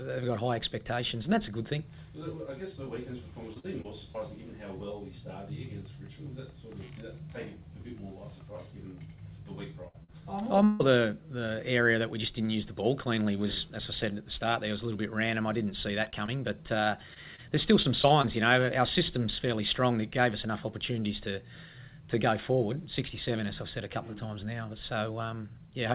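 At 2.84 s, a short concealed packet loss: about 20 ms of audio never arrived, and the receiver extended the preceding sound to bridge it, leaving a brief smear. The same thing happens again at 10.04 s over about 40 ms.

From 3.54 to 4.16 s, repeated packet loss (robotic sound) sets in. Four gaps, the longest 41 ms and about 100 ms in all, are each patched by continuing the last sound, giving a choppy, mechanical texture.

At 9.88 s, a burst of packet loss removes about 60 ms in a row. The concealment holds and fades the last sound before the audio resumes further on.

From 10.64 to 10.82 s, about 160 ms is replaced by a fading continuation of the last sound, with no fall to silence. This is likely a long network dropout.

From 16.04 to 18.25 s, repeated packet loss returns. Ten gaps of up to 27 ms, about 200 ms in total, make that stretch intermittently choppy and robotic.

Throughout, nothing is present above 4 kHz, consistent with a G.711 mu-law call path.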